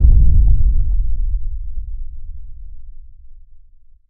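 No technical faults can be heard anywhere in the audio, and the signal stays steady throughout with no audible disturbance.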